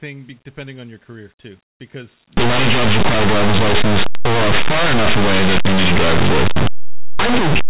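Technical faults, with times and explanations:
2.37–7.69 s, linear audio read as companded: after "your career too because", linear 8-bit samples are decoded as mu-law, so values just on one side of zero become the largest outputs while those on the other side stay small, heard as very loud, harsh distortion.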